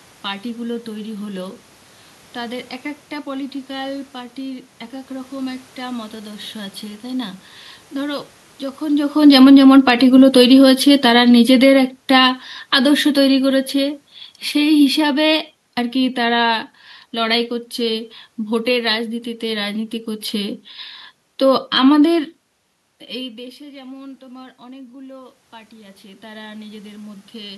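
From 9.14 s to 19.7 s there is automatic gain falling. After the talker moved at about 9 s, the gain control judged the input too loud or its background noise too strong and cut its gain by about 15 dB over roughly ten seconds, so the speech and the room noise sink together. Within that stretch, from 9.68 s to 10.34 s, a brief automatic gain rising pushes the level back up by about 3 dB, a small swell in both the voice and the background.

From 23.17 s to 27.53 s a second automatic gain rising follows a talker movement at about 23 s that dropped the input by about 23 dB. The control raised gain by about 11 dB over some four seconds, so speech and room noise swell together without recovering the full level.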